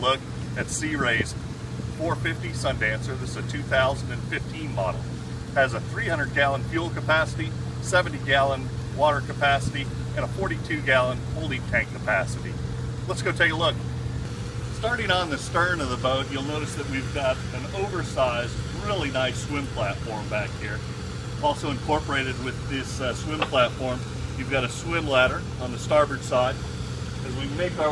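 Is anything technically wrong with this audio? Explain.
No, nothing technically wrong stood out on listening to this audio.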